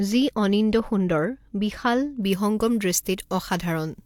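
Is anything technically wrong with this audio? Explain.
Yes. From 2.23 s to the end at 4.06 s the speech has pre-emphasis left on. A treble boost matching the FM 75 µs curve was never undone by its de-emphasis, leaving 10 kHz about 13 dB up on 1 kHz. It sounds thin, bright and sibilant. A spectrogram shows the upper bands brightening abruptly from 2.23 s.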